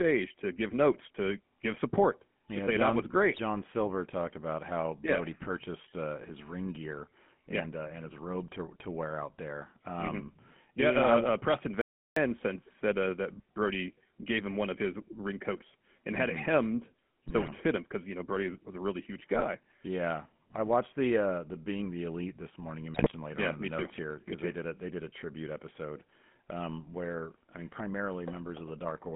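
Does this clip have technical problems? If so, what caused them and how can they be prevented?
Yes, there are three kinds of problem here.

The whole speech clip has the sound of the GSM full-rate codec. It's buzzy and gravelly, with nothing above about 3.4 kHz, which fits the old 13 kbps coder rebuilding speech from a vocal-tract model driven by sparse pulses. Keeping the call on a wideband or modern codec end to end avoids it.

GSM bit errors break through at 3.3 to 3.39 s (right after "that was"), 17.28 to 17.49 s, 19.34 to 19.45 s (just after "was a really huge") and 22.94 to 23.1 s. Flipped bits in the filter, pitch and gain values make those frames squawk, pop and gargle. A stronger radio link with better error protection prevents this.

There's an audio dropout to silence from 11.81 to 12.16 s, about 0.35 s of dead silence with no room tone, ending just before "said uh that". It's likely the input was briefly lost while the recorder kept writing silence. 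Solid connections and monitoring during capture stop that.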